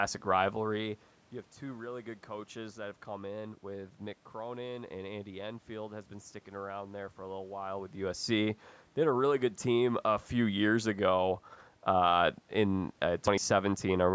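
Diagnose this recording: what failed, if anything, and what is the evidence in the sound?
Nothing failed here: the top end stopping at 8 kHz is just the call's microphone processing, the background noise is the room itself, and the level shifts shortly after the start and again around the midpoint are only the talker moving relative to the mic.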